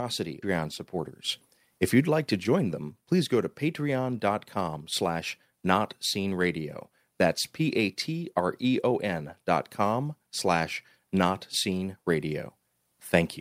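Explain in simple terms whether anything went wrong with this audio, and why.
Near the start, at 0.42 s, the speech suffers a skip ahead. About half a second of audio was dropped in transit or discarded when the buffer overflowed. Playback jumps straight to later speech with no gap, so a piece is simply missing.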